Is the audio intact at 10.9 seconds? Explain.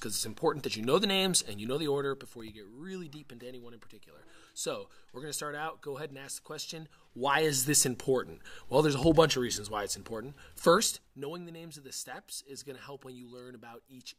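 No. From 10.68 to 11.24 s a ticking zipper noise rides on the sound: the level drops about 15 dB in unsmoothed 2 dB steps, roughly ten a second.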